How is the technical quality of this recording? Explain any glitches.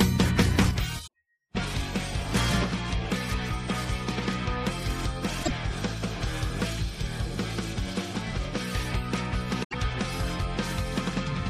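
The technical quality is poor: the level drops twice for long stretches, and three short corrupted bursts break up the audio.

From 0.71 to 2.35 s, and again from 2.63 s to the end, the level falls abruptly by about 6 dB. The likely cause is one channel dropping out before the mono sum. Unlike a fade, the drop is a sudden fixed step.

At 1.03 to 1.08 s, 5.40 to 5.50 s and 9.63 to 9.75 s there is damaged data in a compressed stream. The decoder loses sync and resynchronises on a later frame, producing a short glitch.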